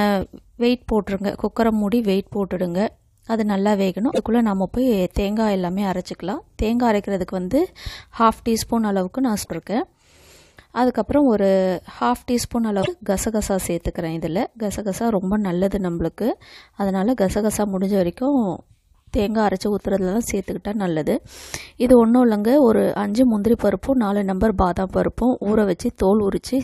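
Three brief glitches break into the audio, at 4.09 to 4.19 s, 9.39 to 9.48 s and 12.79 to 12.88 s, each lasting roughly a tenth of a second. These are damaged data in a compressed stream: at each point part of the encoded stream is corrupted, so the decoder misreads or discards those frames and loses sync until it finds the next valid frame header. What reaches the ear is a short chirp, squawk, click or hole in place of the intended sound.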